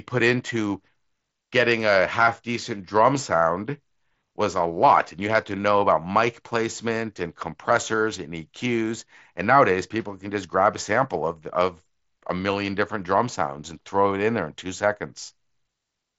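No faults found in the speech; the Bluetooth mSBC headset path behaves as that codec does, with bandwidth reaching 8 kHz and a light grain on louder passages.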